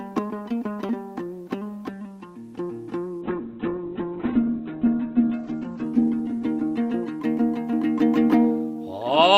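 At 3.22 s a call bitrate drop sets in and lasts until 9.17 s. The audio, carried over an Opus call path with a top end near 12 kHz, turns coarse and watery as the encoder is starved of bits. The top band falls to about 4 kHz, which fits a slide from roughly 48 kbps to 7 kbps, and the worst stretch holds for 1.13 s. Unlike packet loss, there are no gaps or clicks, only continuous smearing and dulling.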